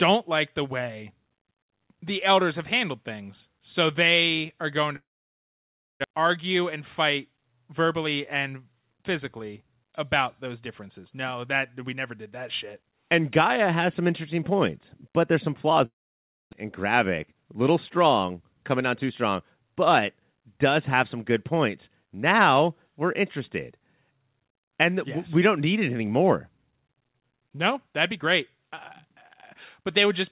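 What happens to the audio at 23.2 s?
Nothing goes wrong at 23.2 s: the speech there is intact, carried through the call path with the G.711 mu-law codec's normal band limit, with nothing above 4 kHz.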